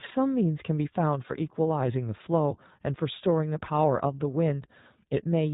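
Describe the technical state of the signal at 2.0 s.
iLBC codec coding runs through 2.0 s, as it does across the whole speech clip. Each 20 ms frame's excitation is coded independently, and nothing above 4 kHz survives, which fits the 15.2 kbps mode. The result is muffled, plainly rough, slightly synthetic speech.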